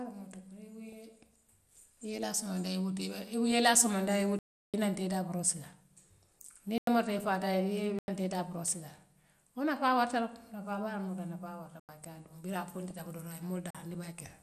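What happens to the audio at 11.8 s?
At 11.80 s the program likely failed to fill its output buffer in time, so a block of samples went out as zeros. The speech cuts to digital silence from 11.80 to 11.89 s, about 93 ms, a length that fits a 4096-sample buffer. The signal drops straight to nothing and returns with no fade, leaving an audible short hole in the speech.

Across this moment, as through the whole clip, a likely cause is MP2 compression at around 80 kbps. The codec splits the signal into 32 sub-bands and shares out too few bits among them, so upper bands are switched off and the remaining ones are coarsely quantised. The speech around the dropout sounds dull, with a plainly audible gurgling, granular distortion.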